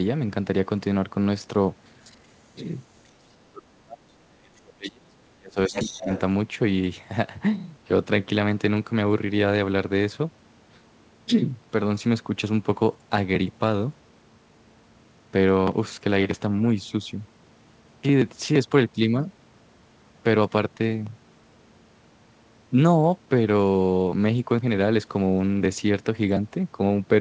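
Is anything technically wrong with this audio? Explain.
Yes. At 2.04–2.17 s, 3.04–3.09 s and 5.67–6.2 s, other side's voice leaking through can be heard. The likely cause is an echo canceller that failed to remove loudspeaker playback picked up by the talker's microphone. The first two scraps sit far below the speech, about 30 dB and 40 dB down. The last one is only about 10 dB down.

From 3.24 to 6.11 s, the talker's speech is suppressed in double talk. With both sides talking, the echo canceller likely could not separate the talker's voice from the echo and attenuated both. For roughly two seconds in total, the speech drops in level, at its deepest by around 35 dB. That drop overlaps the strongest leak at the end. The speech is band-limited to 8 kHz, as expected for the G.722 call codec.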